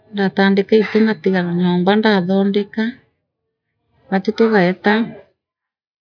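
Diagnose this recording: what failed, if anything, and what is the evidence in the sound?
No failure is audible at any stage here.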